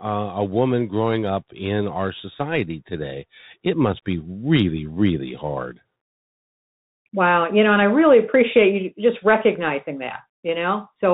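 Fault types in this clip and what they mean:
Bluetooth CVSD headset codec: The speech sounds narrow and boxy, with nothing above about 4 kHz, a granular hiss under the voice, scratchy s sounds, and plainly audible distortion wherever loud high-frequency sound changes faster than the coder can follow. This comes from the narrowband headset link, which fits a 64 kbps CVSD stream: each sample is a single up-or-down bit, and the adaptive step size lags behind steep waveforms.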